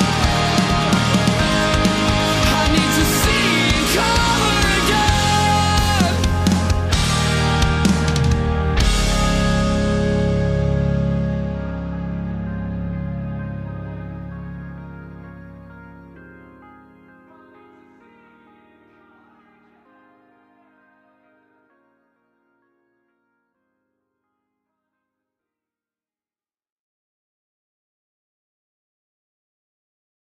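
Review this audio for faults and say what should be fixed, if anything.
Nothing here needs fixing; I listened all the way through and didn't hear a single fault worth flagging.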